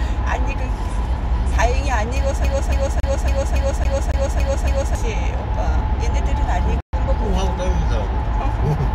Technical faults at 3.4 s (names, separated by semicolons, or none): CD stuck on one turn